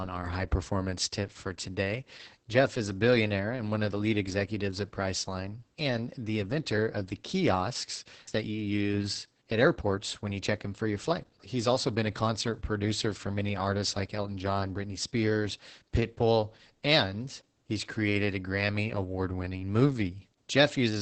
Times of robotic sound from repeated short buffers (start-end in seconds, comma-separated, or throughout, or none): none